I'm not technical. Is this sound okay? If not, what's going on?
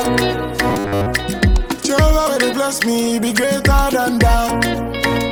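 No. From 0.70 to 1.07 s the sound turns into a rigid, metallic 100 Hz buzz: robotic sound from repeated short buffers. Audio was likely arriving too late, so the player kept replaying the last 10 ms chunk, skipping most of the real material there.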